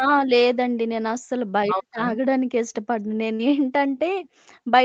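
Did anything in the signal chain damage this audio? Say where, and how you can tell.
Yes, in four places, all on the call side of the chain.

Right at the start, from 0.0 to 0.29 s, and again from 1.65 to 1.99 s, the speech sinks hard, dropping by somewhere around 40 dB, and comes back up. That deep, gated dip is what speech suppressed in double talk sounds like. It's likely the echo canceller in the call processing hearing both sides at once, failing to tell its own talker from loudspeaker echo, and turning everything down for those stretches.

Around 3.35 to 3.41 s there's a short smeared patch, roughly 40 ms where the real audio just isn't there. That's short concealed packet loss at the network and decoder stage. The packets arrived too late or not at all, so the decoder stretched the preceding sound to cover about 36 ms of the gap and then blended back into the incoming stream.

Near 4.25 to 4.29 s a faint scrap of the talker comes back, delayed by about 0.26 s and sitting roughly 30 dB under the speech. 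That's an echo leak, likely from a far-end loudspeaker whose echo canceller let a bit of the mic pickup through and sent it back down the call. It's quiet and brief, but the fixed delay gives it away.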